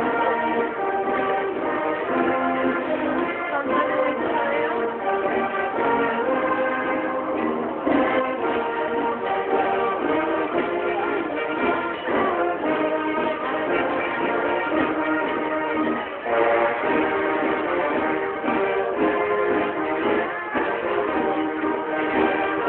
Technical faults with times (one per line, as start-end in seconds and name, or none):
none